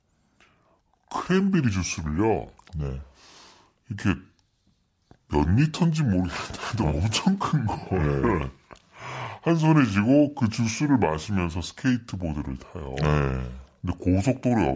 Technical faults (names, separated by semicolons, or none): wrong sample rate